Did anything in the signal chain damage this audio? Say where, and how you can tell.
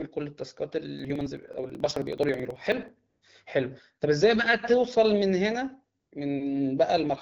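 Yes. At the driver or buffer stage, periodic USB or driver dropouts from 0.99 to 2.99 s produce regular ticks every 54 ms, each skipping roughly 10 ms of audio.

In call processing, AMR comfort noise appears at 3.09 to 3.21 s and 5.99 to 6.11 s. Speech frames stopped for 120 ms, and smooth synthetic noise replaced the real background.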